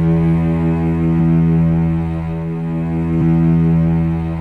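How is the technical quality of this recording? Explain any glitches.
Two brief glitches, both compressed frames skipped. At 1.19 s about a tenth of a second of audio vanishes, and at 3.21 s roughly 70 ms does. In each case the decoder dropped whole frames, which fits a 23.2 ms frame length, so the sound jumps ahead.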